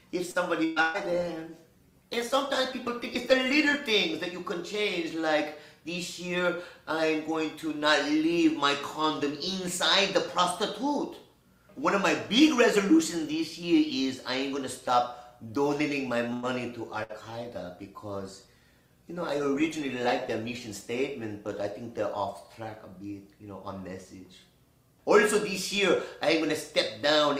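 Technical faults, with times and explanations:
0.31 to 0.38 s, short stall from a late packet: the sound hangs for 32 ms with a faint buzz, because the jitter buffer ran empty and the receiver stretched the last sound.
0.65 to 0.79 s and 0.82 to 0.97 s, burst of packet loss: two held, fading sounds replace 120 ms each. The receiver continued the last sound through the lost packets, then resumed further on.
0.77 to 3.88 s, call bitrate drop: the sound turns rough and duller, because the encoder fell from 48 to 18 kbps for about 3 s and trimmed the high frequencies.
16.33 to 16.46 s, short stall from a late packet: a 98 ms hold with a slight dip, because the receiver stretched the last sound while waiting for the late packet. Nothing is lost.
16.95 to 23.59 s, call bitrate drop: the sound is coarse and muffled again, because the encoder was cut from 48 to 18 kbps and stayed at the low rate for about 3.7 s.
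17.03 to 17.12 s, burst of packet loss: a brief fading sound stands in for 60 ms of missing audio, concealed by extending the preceding sound before playback jumps ahead.
19.34 to 20.43 s, jitter buffer speed-up: the sound runs about 5% faster at unchanged pitch, because the receiver removed pitch-period slices totalling about 70 ms to shrink an overfull buffer.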